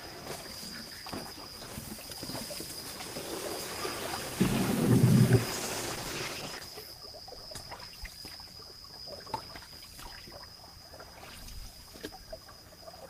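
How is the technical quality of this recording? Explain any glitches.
The recording has one clear glitch, a single stretch of degraded audio in the middle.

A call bitrate drop runs from 5.51 to 6.81 s. The call's bandwidth estimate fell and the encoder was told to spend far fewer bits, and the coarseness fits a fall from 32 to 14 kbps, held at its lowest for about 1.2 s. With so few bits the codec quantises more crudely and gives up the upper frequencies, so the sound turns muffled and watery until full quality returns.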